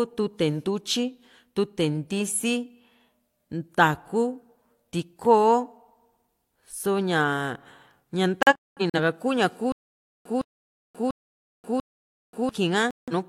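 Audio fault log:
8.43 to 8.99 s, digital broadcast dropout: the speech breaks into several short holes, about 0.3 s lost in total across roughly half a second, the longest gap about 0.21 s. The receiver muted while damaged frames failed their checks, which points to about seven frames lost, and the speech resumes further along with the missing stretch gone. Unlike a stutter, nothing repeats. The holes fall irregularly, with no returning fragment.
9.72 to 12.49 s, stutter with silent gaps: a 0.16 s fragment plays, then about 0.53 s of dead digital silence, and the same fragment returns, four times at a steady 0.69 s period. This is likely a stalled player or stream replaying its last buffered piece on each retry before running dry. The identical repeated burst and the clockwork spacing set it apart from a dropout's irregular muting.
12.91 to 13.13 s, digital broadcast dropout: about 0.17 s muted, which fits roughly four lost frames. 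The speech cuts out and resumes past the gap without repeating anything, the same receiver muting as the earlier dropout.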